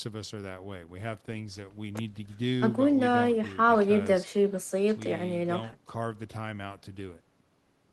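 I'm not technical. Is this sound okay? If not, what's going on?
Yes, no faults heard.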